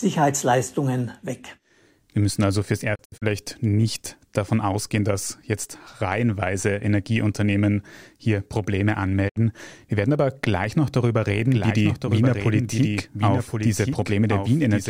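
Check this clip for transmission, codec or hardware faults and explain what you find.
Two kinds of fault can be heard: digital broadcast dropouts at two points, and a doubled audio track that runs to the end.

Digital broadcast dropout, 2.94 to 3.24 s, just after "müssen also fürs" and before "nicht davon ausgehen dass". The receiver stopped getting valid frames and muted until clean ones arrived again. The result is a cluster of short holes totalling 128 ms, spread over 256 ms, with the longest gap 64 ms. Each gap fades in and out over 20 ms, and four frames were lost in all. A second, single dropout at 9.28 to 9.38 s silences 64 ms, again with 20 ms fades. The missing sound never returns.

Doubled audio track, from 11.52 s to the end, starting right after "aber gleich noch darüber". A second full-band copy of the speech arrives about a second late and about 5 dB quieter. It is likely caused by the same signal being captured again through a slower path and mixed back in. 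Because it has no room colour or decay, it sounds like a distinct, slightly softer repeat rather than reverb. It appears abruptly and does not stop before the clip ends.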